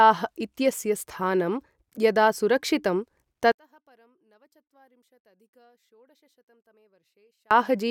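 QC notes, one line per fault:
3.52–7.51 s, one channel inverted: the speech falls by about 38 dB and almost vanishes, leaving only a faint remnant. The likely cause is reversed polarity on one stereo channel, so the centred voice, common to both channels, cancels when they are summed to mono.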